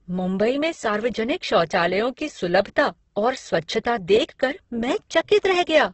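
Throughout the speech the sound is grainy and rough, with noisy fizz where tones should be and nothing above about 8.1 kHz. This is heavy Opus compression, likely in its CELT music mode at a rate that points to around 12 kbps, filling starved bands with noise.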